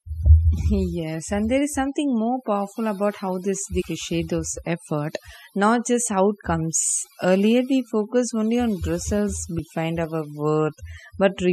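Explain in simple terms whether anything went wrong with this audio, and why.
Yes, two things went wrong. The whole speech clip has overdone noise removal. A noise reduction tool was set too strong. It cut away quiet parts of the voice along with the noise. The background drops and breaks up into twinkling specks.

There is also damaged data in a compressed stream, at 3.80 to 3.82 seconds and at 9.58 to 9.60 seconds. Part of the file was corrupted, so the player misread those bits and had to find its place again. Each spot is a brief chirp or blip. The first falls between "powerful about how this" and "those effort not just". The second comes right after "focused only on results".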